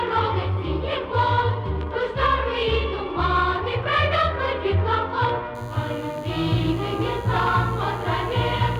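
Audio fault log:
5.55–8.79 s, DECT cordless phone buzz. A thin, steady 100 Hz buzz rich in harmonics sits about 25 dB below the signal. Radio bursts every 10 ms get rectified by the audio circuit.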